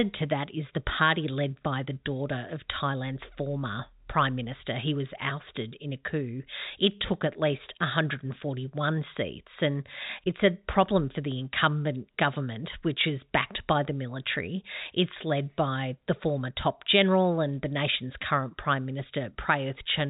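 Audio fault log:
No faults are heard in this speech clip. The G.711 telephone coding path is working normally, so the sound is held below 4 kHz with only a faint noise that follows its level.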